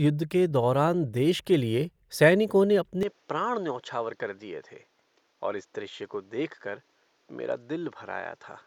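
At 3.03 s, just after "के लिए सैनिकों ने", the speech abruptly dulls and drops a few decibels without any gap, losing everything above 7.6 kHz and gaining faint new background noise until the end. The likely cause is input switched to a poorer device with a narrower band.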